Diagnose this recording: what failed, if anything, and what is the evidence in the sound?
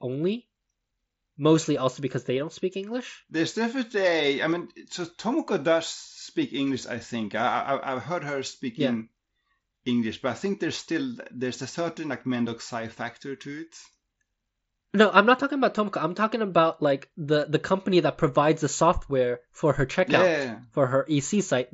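Nothing in the recording has failed: the speech arrives over a Bluetooth mSBC headset link working as designed, its bandwidth topping out at 8 kHz, with only the light grainy texture on louder sounds that this wideband headset codec leaves behind.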